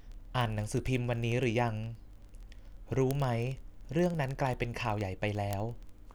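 From about 0.12 s right through to 6.14 s, the speech is peppered with word clock ticks: a steady train of sharp clicks of uneven strength roughly every 20 ms, so around fifty a second and a few hundred in all. The receiving end is free-running on its own clock, off from the sender's by something like a tenth of a percent, and each time the two slip past each other a single sample gets dropped or repeated, leaving a tick.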